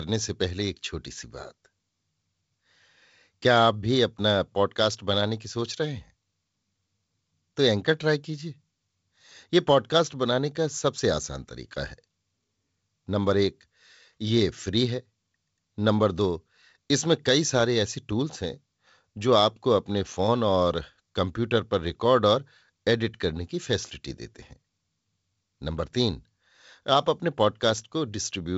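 Nothing stood out on listening to this speech, which carries the expected sound of G.722 wideband telephone coding with nothing above about 7.7 kHz.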